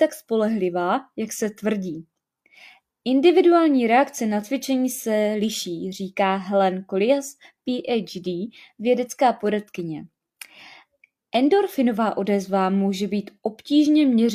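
Listening closely to the speech, nothing stood out as a technical fault at any point.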